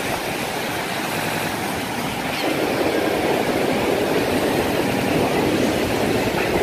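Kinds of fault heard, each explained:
Repeated buffer: at 1.21, 3.07 and 4.92 s, audio arrived late, so the last 93 ms block replayed three, one and two extra times as a hard-edged stutter.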